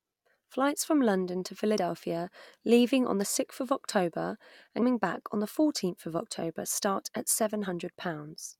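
Three short glitches break through the speech at 1.77 s, at 4.81 s just before "back on the", and at 7.64 s right after "start at". This is damaged data in a compressed stream: corrupted frames confuse the decoder until it regains sync.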